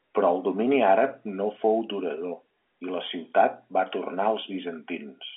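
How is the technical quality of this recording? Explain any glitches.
No glitches or faults audible.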